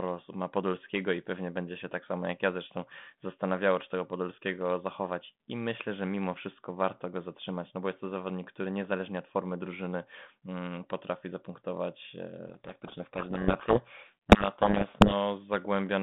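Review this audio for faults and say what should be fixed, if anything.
From 12.48 to 15.13 s, the two ends of the G.726 link stop agreeing on the bit order of each code word, a codec payload misread. The decoder keeps taking the frames as valid, but every ADPCM difference value is rebuilt from scrambled bits, so the adaptive predictor is steered by garbage. The speech is buried under harsh, grinding distortion for those 2.65 seconds. It clears at 15.13 s, where the 32 kbit/s telephone-band sound, limited to 200 Hz to 3.6 kHz, comes back. To prevent it, fix the G.726 packing order at call setup and make both sender and receiver use exactly the negotiated format.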